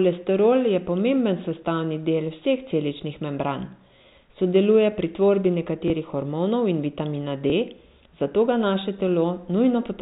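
At 5.88 to 5.90 s, between "sodeluje pri tvorbi" and "hormonov in vitamina", and again at 7.50 to 7.52 s, just after "hormonov in vitamina", there is packet loss with the last packet repeated. Each time one 20 ms stretch goes missing and the previous 20 ms chunk plays again. Each event gives a small blip. A plain dropout would leave a gap of silence instead. The telephone-band G.711 coding sounds as expected.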